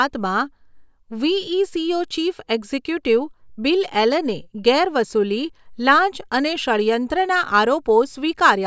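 No technical faults can be heard anywhere in the speech recording. There is nothing here that needs a timestamp or a closer look.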